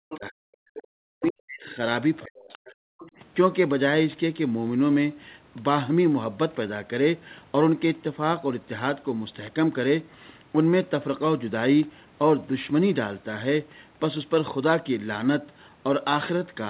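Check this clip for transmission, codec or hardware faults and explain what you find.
Two echo-canceller faults occur in the first three seconds of this speech, both tied to the other side talking at the same time.

Speech suppressed in double talk occurs from 0.0 to 0.57 s, 0.78 to 1.79 s and 2.25 to 2.95 s. The speech sinks, at its deepest by about 40 dB. The likely cause is an echo canceller that could not separate the near talker from loudspeaker echo and turned everything down. Unlike packet loss, the level is ducked over stretches rather than cut into short, even gaps.

Other side's voice leaking through appears as brief scraps at 0.1, 1.24, 2.19, 2.49 and 3.0 s, each lasting about 0.1 s or less. They sit about 15 to 25 dB below the main speech, within the narrowband call audio, which has nothing above 4 kHz. The likely cause is residual loudspeaker echo that the canceller failed to subtract. 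Unlike reverberation, these fragments are a different voice rather than a tail of the talker's own speech.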